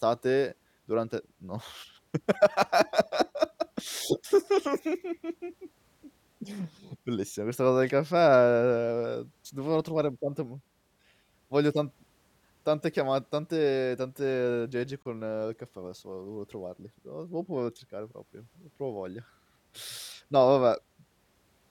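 At 15.03 s, just after "tanti aggeggi", the speech drops to silence for about 28 ms. It resumes at 15.05 s with "il caffè adesso". The gap is a clean cut, not a fade. This is a Bluetooth stall, likely caused by radio interference delaying packets on the wireless link. The headphones' buffer emptied before resent data arrived, so playback simply paused. The sound picks up again after the brief hole.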